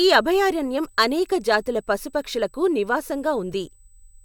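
From start to finish a faint, fixed-pitch whine sits at 8 kHz under the speech, roughly 40 dB below it: USB whine. The bus's 125-microsecond microframes pull current in regular bursts, and that ripple leaks through shared power or ground into the audio path. Unlike mains hum, which is low and buzzy at 50 or 60 Hz and its harmonics, this is a thin, high tone that does not track the speech.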